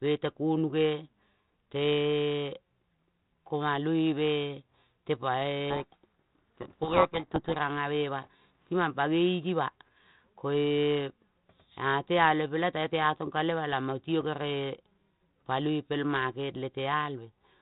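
From 5.7 to 7.57 s there is a codec payload misread: the receiver unpacks each G.726 code word in the wrong bit order and decodes wrong prediction differences. The speech is buried in harsh distortion, far rougher than the light coding noise of the 32 kbit/s G.726 around it.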